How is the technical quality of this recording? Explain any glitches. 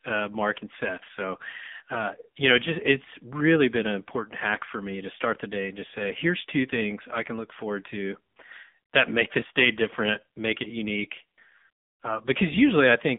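The recording is limited by one fault running through its whole length: AMR narrowband mobile codec coding. Across the clip, the speech sits in a narrow line band of roughly 200 Hz to 3.6 kHz with nothing above 3.7 kHz. The codec models the vocal tract from sparse pulses per subframe, and the heavy damage gives a buzzy, synthetic quality that points to a low bitrate around 6.7 kbps.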